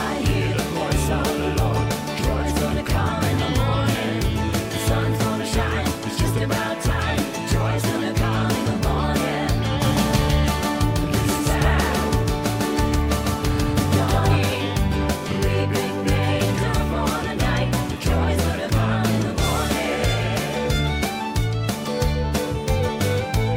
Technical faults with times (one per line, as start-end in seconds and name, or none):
9.85-14.37 doubled audio track